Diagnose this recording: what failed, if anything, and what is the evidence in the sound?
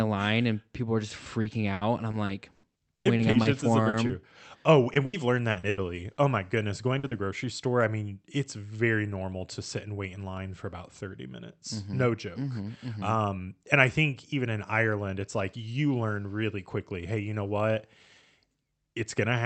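Repeated packet loss (robotic sound), a network fault, runs from 1.41 s to 6.43 s, right after "and people are just". The speech turns choppy. Twenty gaps, the longest 100 ms, were each patched by extending the last sound. About 17% of that stretch is synthetic fill.

Lost packets rebuilt from error correction follow at 6.87 s, 7.03 s and 7.11 s. Each is a 20 ms frame. There is no gap, but each frame sounds rougher and noisier. The decoder played the low-bitrate copy carried by Opus in-band forward error correction in the next packet.

Short concealed packet loss, also on the network side, hits 6.99 s to 7.05 s and 7.07 s to 7.13 s, just before "grocery store I mean". Each hole is 40 ms, filled by continuing the last sound and blending back in. It is heard as a brief smear or wobble.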